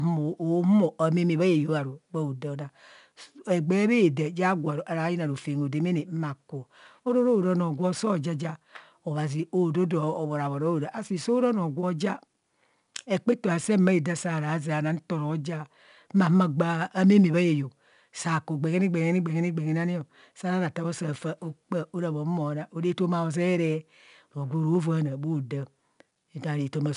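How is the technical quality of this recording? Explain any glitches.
The recording is clearly compromised by coding damage. Throughout the speech there is a gritty, grainy hiss that rides on every loud syllable, with roughness on sharp onsets and a dull top end, since nothing reaches above 10.6 kHz. This is 4-bit ADPCM compression: each sample is stored as a coarse step from a prediction, so quantisation noise tracks the signal level and smears attacks. The bandwidth and data rate suggest a low sample rate near 22 kHz, at roughly 89 kbps.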